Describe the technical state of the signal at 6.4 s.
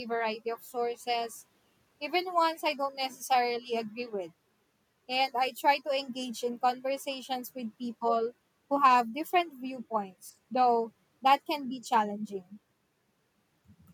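The speech signal at 6.4 s is intact, with no audible fault at that moment.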